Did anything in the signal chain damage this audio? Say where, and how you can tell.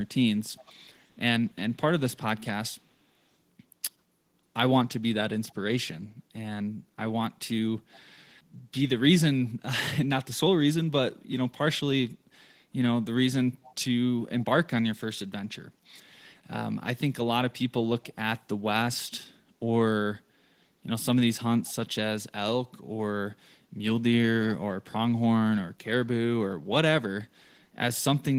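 Yes. The call processing let an echo leak through, likely because the far end's echo canceller left some of its loudspeaker pickup in the return path. A faint copy of the speech, 395 ms late and roughly 25 dB down, surfaces briefly at 0.56–0.73 s and 13.63–13.75 s.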